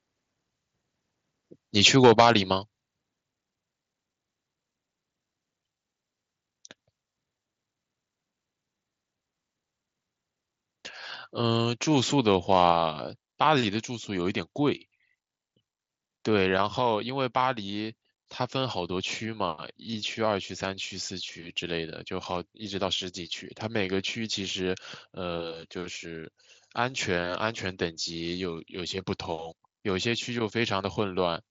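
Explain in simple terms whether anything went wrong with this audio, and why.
Microphone overload, from 1.85 to 2.31 s and again from 12.52 to 12.72 s: the loudest moments turn harsh and crackly. The likely cause is a microphone set too sensitive, so the strongest peaks exceeded what the converter could handle and had their tops sliced off.

Microphone volume stepped down, at 2.21, 3.21, 12.72 and 16.62 s: the sound and background suddenly get quieter in single jumps, with the first coming during the first distorted burst and the third right after the second. This is likely the call software noticing the overload and turning the input down.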